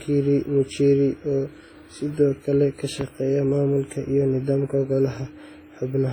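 WMA compression runs throughout the speech, and the damage is heavy: a washy, ringing quality with hiss that swells and fades with the voice. This is likely from a low-bitrate transform codec, consistent with around 24 kbps, where quantisation noise smears across long blocks and weak detail is discarded.

A loud pop sits from 3.01 to 3.05 s, right after "oo sidoo kale ka". It is a single sharp pop, roughly 10 dB above the speech, while the voice carries on underneath. It is likely a sudden voltage step or pulse, such as from a plug, switch, static or driver glitch, briefly shaped by the downstream circuitry.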